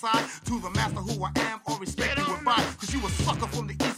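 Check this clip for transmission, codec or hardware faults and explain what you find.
No faults detected here.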